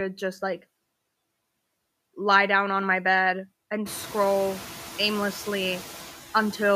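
Noise suppressor artifacts run through the whole speech clip: the suppressor pulls down the bands it judges to be steady noise, by about 16 dB, so the background drops away in pauses and returns beneath speech. On a spectrogram the noise floor goes dark between phrases and fills in under each one. The room noise jumps by about 22 dB at roughly 4 s, ending about 17 dB below the speech, which makes that pumping more exposed.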